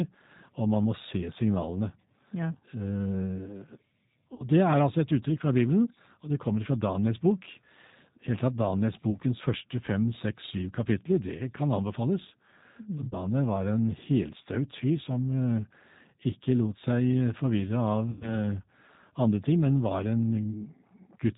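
A speech recording carried through the G.729 codec at 8 kbit/s throughout, with plainly audible rough, synthetic texture; a spectrogram shows nothing above 4 kHz. VoIP packet loss concealed by the speech codec causes dropouts near 2.51–2.57 s, 4.34–4.44 s (before "det er altså et"), 9.11–9.17 s (before "første fem seks"), 13.08–13.16 s and 18.11–18.37 s, where extrapolated sound, a buzzy tone or coloured noise, fades and leaves smeared, weakened harmonics on the spectrogram.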